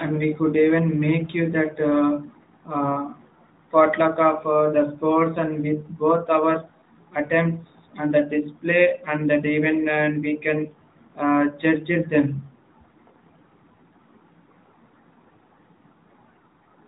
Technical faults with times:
none

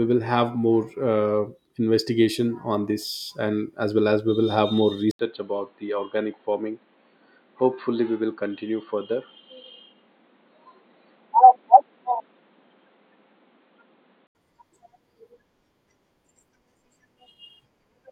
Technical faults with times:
5.11-14.35 input switched to a poorer device

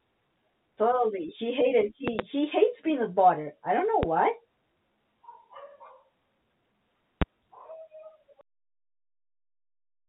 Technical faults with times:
2.08-2.22 loud pop
4.03-4.06 loud pop
7.22-7.24 loud pop

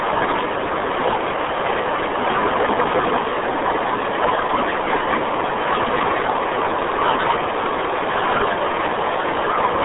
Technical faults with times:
0.00-9.85 RealAudio 14.4 codec

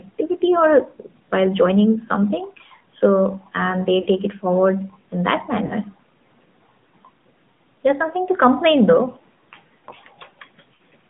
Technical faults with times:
0.00-11.09 AMR narrowband mobile codec
4.02-4.08 lost AMR speech frames
5.66-5.73 lost AMR speech frames
10.74-10.79 lost AMR speech frames

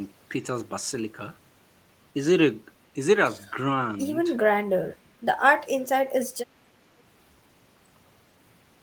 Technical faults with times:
4.54-5.16 speech suppressed in double talk

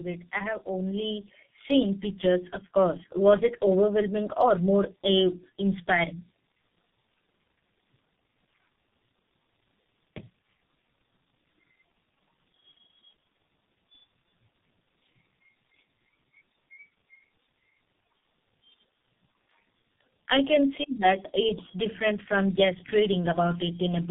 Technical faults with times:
0.00-24.10 tandem speech coding
0.31-4.44 automatic gain rising

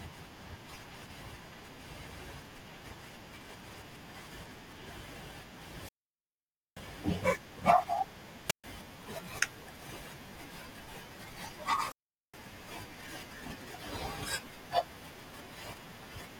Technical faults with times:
5.74-6.85 wireless microphone squelch dropout
8.46-8.64 wireless microphone squelch dropout
11.78-12.41 wireless microphone squelch dropout

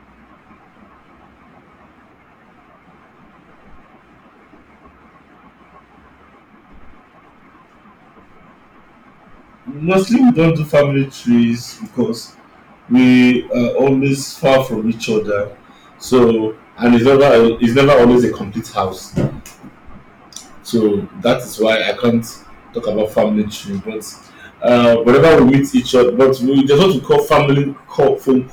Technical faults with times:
0.00-28.52 hard clipping

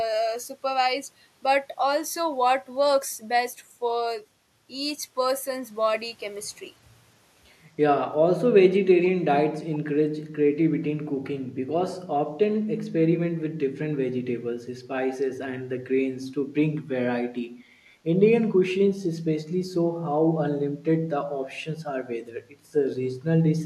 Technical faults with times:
9.03-9.11 echo leak

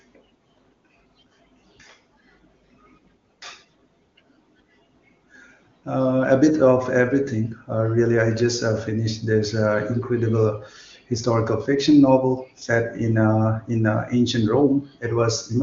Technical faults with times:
none

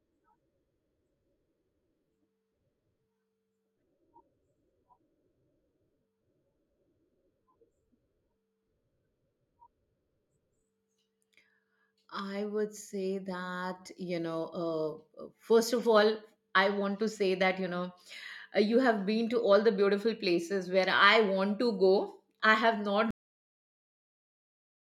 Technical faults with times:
23.11-24.97 cut-off end

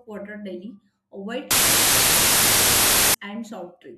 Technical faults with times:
1.51-3.14 wrong sample width

